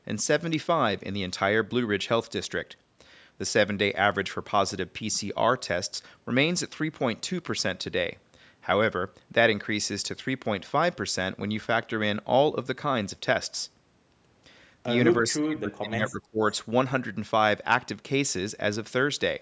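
A speech recording passed through call microphone processing, with nothing above 8 kHz. From 15.22 to 16.4 s the voice sinks sharply, at its deepest by about 30 dB. Roughly a second of the speech is affected. This is speech suppressed in double talk. The likely cause is the far end speaking at the same moment. The echo canceller then could not tell this talker from its own loudspeaker echo, so it turned everything down.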